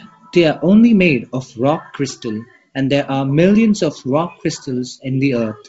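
Nothing stood out on listening to this speech, which carries the band limit of G.722 wideband telephone coding at 64 kbit/s, with no content above about 7.7 kHz.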